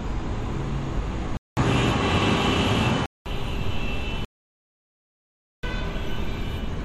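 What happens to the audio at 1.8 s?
From 1.37 to 3.26 s the sound cuts out for 200 ms, then returns duller, with nothing above 11.4 kHz, a level shift of roughly 5 dB and a different background noise. This is likely an input switched to a poorer device. A plain filter wouldn't change level and noise too.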